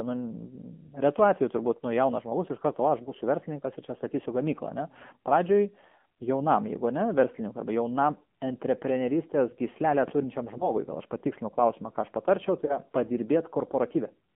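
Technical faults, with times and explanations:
Throughout: AMR narrowband mobile codec. The speech is confined to roughly 150 Hz to 3.4 kHz and has a buzzy, synthetic texture that points to a low mode near 7.4 kbps.
3.04–3.12 s, 10.58–10.71 s, 12.66–12.77 s: lost AMR speech frames. Each brief dip or warble, the first just after "iš karto va aš" and the second just before "gal aš patikslinu klausimą", fits a single missing 20 ms frame concealed by repeating the previous pitch and vocal-tract settings at reduced gain.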